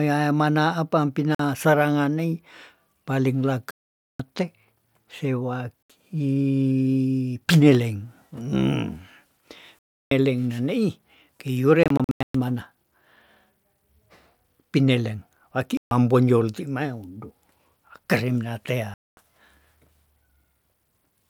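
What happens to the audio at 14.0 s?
At 14.0 s the audio is intact, with no dropout, click or other fault at that point.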